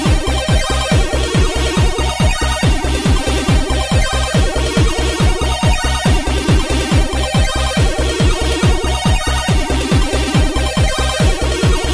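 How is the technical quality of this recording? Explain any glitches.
No glitches can be heard anywhere in these sounds.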